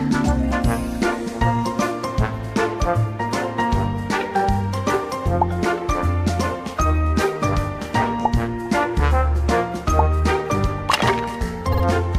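Repeated frames appear from 11.72 to 11.82 s, near the very end. A short block of compressed data, about 52 ms long, which fits a pair of codec frames, was decoded and played two extra times, so the same sliver of sound comes back in quick succession. It is heard as a brief stutter, and because the repeats are inserted rather than replacing anything, the audio runs about 104.5 ms longer than it should.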